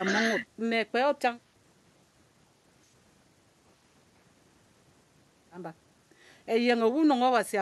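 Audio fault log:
No audible faults heard.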